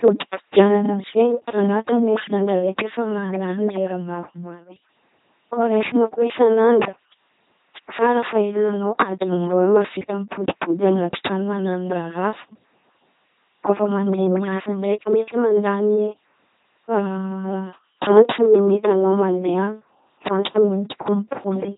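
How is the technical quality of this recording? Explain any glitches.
The technical quality is poor throughout. The speech has a heavily buzzing, mechanical robot character, with nothing above 3.9 kHz. This is the LPC-10 vocoder: each moment is rebuilt from a ten-pole filter driven by either a pulse train or noise, which fits a 2.4 kbit/s rate. Wrong voicing choices produce stray buzzes or hiss.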